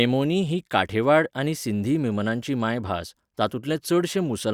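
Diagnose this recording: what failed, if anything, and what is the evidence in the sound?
The fault lies in sample-rate conversion: the resampler restarted on every block when converting 48 kHz to 44.1 kHz. Each 20 ms block's edges were computed without real neighbouring samples, leaving a 50 Hz buzz throughout the speech that stops in pauses. A spectrogram shows faint vertical lines every 20 ms; the waveform shows small discontinuities there.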